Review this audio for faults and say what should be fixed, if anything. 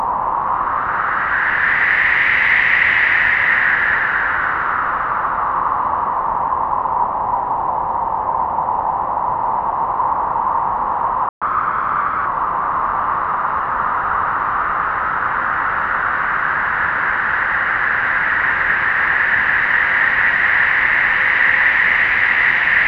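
Playback stall at 11.29 to 11.42 s: the sound cuts out mid-flow for about 126 ms and then resumes. The gap is a hole in the output, not a fade or a dip, so the player most likely ran dry of buffered data or had its audio thread blocked for that moment. Nothing was written to the output until it recovered, leaving a short, clearly audible dropout.

Catch-up at higher speed at 11.42 to 12.26 s: immediately after the dropout, the audio plays back at 1.15 times normal speed for just under a second. The player resamples to work through the backlog from the stall, so speed and pitch rise together, by about two semitones, until the lost time is recovered and playback returns to normal rate.

Increase the playback buffer and keep the audio thread from being blocked so the stall never happens, and if a stall does occur, skip forward or time-stretch without changing pitch rather than resampling faster.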